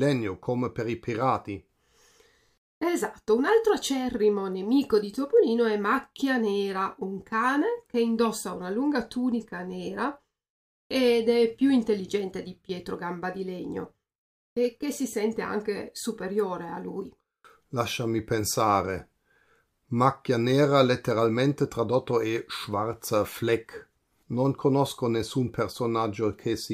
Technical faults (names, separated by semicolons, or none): none